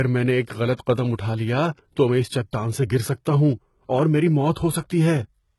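The clip is speech, and the whole of it carries the marks of low-bitrate audio saved at a high bitrate. Nothing sounds above 11.8 kHz, so the top is cut cleanly away. The detail loss and smearing of a very low-bitrate encode remain. The likely cause is an earlier encode at a very low bitrate, which fits HE-AAC near 16 kbit/s, re-saved as high-bitrate MP3. The second pass cannot restore what the first removed.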